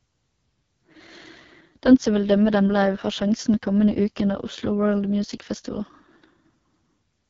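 From start to finish the speech sounds rough and raspy, with a buzzy, gritty edge and nothing above 7.4 kHz. This is the AMR wideband (HD Voice) codec at its lowest setting, which fits about 6.6 kbit/s: too few bits for its pulse-driven vocal model.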